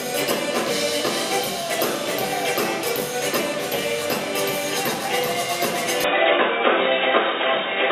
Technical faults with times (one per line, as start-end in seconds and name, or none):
6.04-7.91 input switched to a poorer device